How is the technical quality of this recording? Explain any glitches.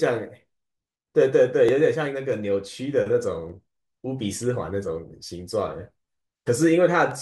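The recording has one recurring glitch. From 1.69 s to 7.11 s, regular clicks every 1.8 s during the speech are clock drift buffer slips, likely from mismatched device clocks dropping or repeating a few dozen samples. They appear as thin vertical spectrogram lines and small waveform jumps.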